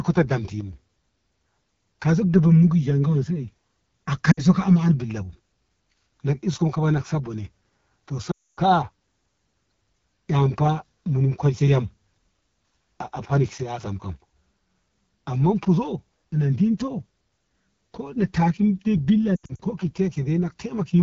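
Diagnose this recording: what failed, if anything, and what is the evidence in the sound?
Codec stage: AMR wideband (HD Voice) codec at 8.85 kbit/s, one of its lowest rates. The speech sounds rough and raspy throughout.

Network stage: lost AMR speech frames at 4.31 to 4.42 s, 8.31 to 8.60 s, and scattered over 19.36 to 19.61 s. The decoder reuses the last good settings with falling gain, so the sound drops to near silence within two frames.

Wiring or playback stage: from 13.63 to 13.80 s the level drops abruptly by about 6 dB. The likely cause is one channel dropping out before a mono sum.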